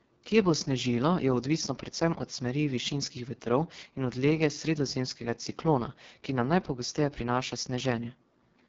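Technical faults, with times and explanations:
Throughout, AMR wideband (HD Voice) codec: heavily rough, raspy model-coded speech, fitting its lowest 6.6 kbit/s mode; unlike narrowband AMR, sound extends to 7.3 kHz, then stops dead.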